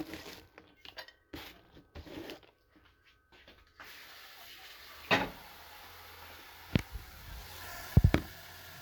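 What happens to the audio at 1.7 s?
From 1.65 to 1.70 s, overlapping chunks replay a 50 ms slice at a 3 s chunk join, heard as a stutter; the waveform shows that segment duplicated.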